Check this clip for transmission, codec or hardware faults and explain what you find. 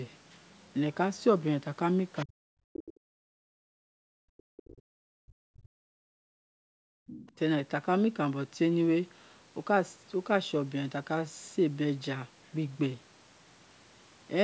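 Echo-control faults are present, all tied to a speakerphone-style call path; the audio stops at 8 kHz, which fits normal wideband call microphone processing.

Other side's voice leaking through, at 2.19 to 2.24 s and 7.07 to 7.32 s: faint scraps of a second voice, likely residual loudspeaker echo the canceller missed, roughly 20 to 25 dB below the talker.

Speech suppressed in double talk, from 2.25 to 2.99 s and 3.76 to 5.76 s: the talker's level collapses by up to roughly 40 dB, likely as the canceller treats overlapping speech as echo.

Background gated by the echo canceller, from 3.27 to 3.48 s and 6.04 to 7.07 s: room sound drops out by about 40 dB and about 37 dB, then returns when suppression releases.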